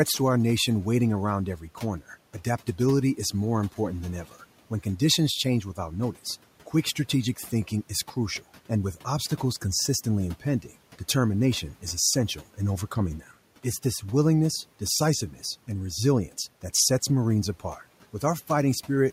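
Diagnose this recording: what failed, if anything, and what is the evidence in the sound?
Between 1.57 and 1.83 s, after "our nation waiting around" and before "adaptability is more important", the speech turns faint and swallowed, dipping by up to about 8 dB over roughly 150 ms. This is speech cut by the noise suppressor in call processing: it treated quiet speech as the room noise, which sits about 24 dB lower.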